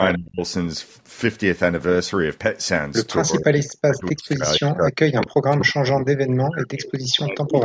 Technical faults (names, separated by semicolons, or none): speech suppressed in double talk; echo leak